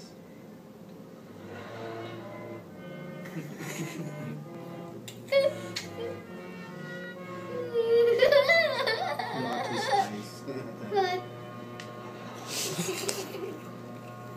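From 0.81 s to 13.27 s, a click recurs every 1.25 s, about ten in all. These are clock drift buffer slips. Two clocks likely disagree by a few hundred parts per million. The buffer drifts until a small block of samples is dropped or repeated.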